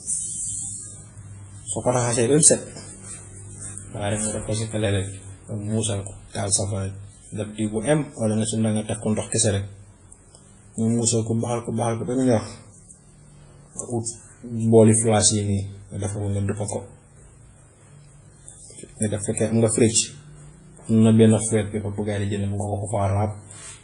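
Speech affected throughout by low-bitrate audio saved at a high bitrate: a spectrogram shows a hard, flat ceiling at 10.1 kHz with empty space above, and the smeared texture fits an early 24 kbit/s WMA encode, likely re-saved later as 192 kbit/s MP3.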